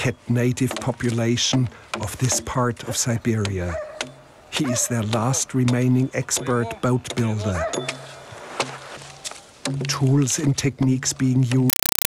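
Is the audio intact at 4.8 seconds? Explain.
Yes, the audio is intact at 4.8 seconds, with no dropout, click, distortion or other fault at that moment.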